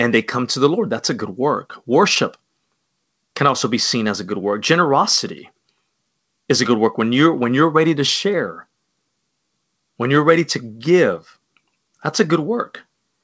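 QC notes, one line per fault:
Nothing stood out on listening to this speech, which comes over the call path with its G.722 coding and no content above 8 kHz.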